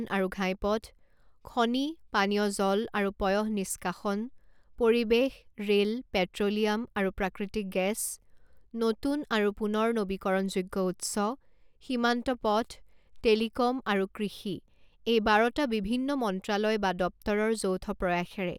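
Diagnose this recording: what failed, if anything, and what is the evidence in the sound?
Nothing failed here: the speech holds steady the whole way, with no audible trouble at any stage from capture to playback.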